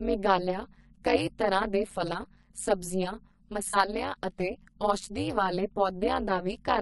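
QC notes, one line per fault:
Throughout: overlap-add ripple, a metallic buzz near 200 Hz with extra tones around each note as frames recombine with uneven overlap gain, level swinging by about 60 dB each frame.
Throughout: low-delay AAC compression, rough grainy speech with noise between harmonics and a dulled top band, likely from short-frame AAC-ELD coding at a bitrate that fits 32 kbps.
3.69–3.75 s: AAC frame loss with concealment, a brief smeared, phasey patch just before "ਅਤੇ ਔਸ਼ਧੀ ਵਾਲੇ", where about 40 ms went missing and the decoder filled it from the previous spectrum.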